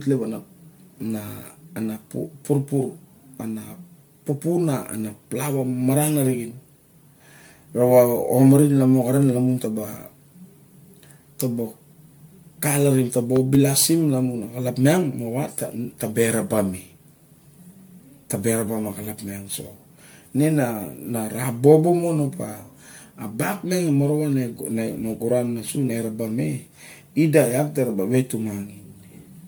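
From start to finish the speech has a swirly, hollow, smeared quality, with blurred consonant attacks and nothing above 19.9 kHz. That is more damage than a single MP3 pass at around 130 kbit/s would leave, so the likely cause is generation loss from roughly ten encodes, each adding its own quantisation noise. Unlike band-limiting, this fault also smears the sound.

Just after "calarim ta ba", between 13.36 and 13.57 s, a loud pop appears as two sharp pulses peaking about 10 dB above the speech, likely an electrical step such as a plug or static discharge. The speech continues underneath. A dropout or clipping would instead interrupt or flatten the signal.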